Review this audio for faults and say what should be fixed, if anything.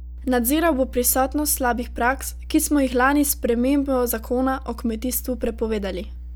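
Mains hum runs through the whole speech clip: a steady 60 Hz tone with low harmonics, sitting only roughly 15 dB under the speech. It comes from the power line coupling in through a ground loop or a nearby transformer. Unlike broadband rumble or handling noise, its pitch and level never waver. Prevent it by fixing the ground loop with a single grounding point or an isolation transformer, and keeping cables away from power supplies.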